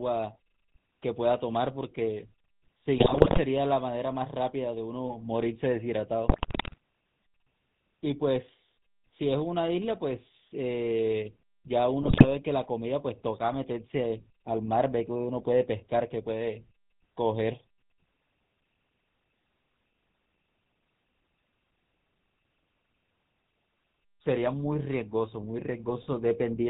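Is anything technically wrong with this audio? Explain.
Yes. The whole clip has gone through the GSM full-rate codec, and the damage is plainly audible. The speech is modelled as a vocal-tract filter fed by a coarse, regularly spaced pulse excitation, at what sounds like the 13 kbps rate. Nothing comes through above 4 kHz, so the voice sounds buzzy and gravelly throughout.

There are also GSM bit errors in three bursts, from 2.98 to 3.40 s, 6.28 to 6.78 s and 12.02 to 12.28 s. Corrupted bits reach the decoder and scramble the filter, pitch and gain values frame after frame while each burst lasts. That twists the spectrum and makes the level jump, so the speech breaks into squawks, pops and gargling.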